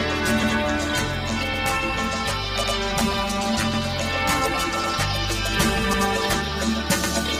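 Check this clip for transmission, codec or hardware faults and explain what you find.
Two faults are audible: steady clock drift across the whole clip, and a repeating stutter from overlapping chunks.

Clock drift between sender and receiver runs from start to finish. The sending clock is a few percent faster than the receiver's, so audio arrives faster than it is played. The jitter buffer keeps overfilling, and the receiver keeps dropping short slivers to catch up. This produces small, irregularly spaced timing hiccups throughout, little skips and jolts in the flow with no fixed rhythm.

Overlapping chunks appear at 0.43, 1.53, 2.64, 3.74, 4.84, 5.93 and 7.04 s. The audio was handled in chunks of about 1.0 s, and each new chunk began 100 ms before the previous one had finished. So at every join, that 100 ms stretch plays twice. The result is a regular stutter, a brief doubled fragment with a click-like seam, recurring roughly every 1.1 s.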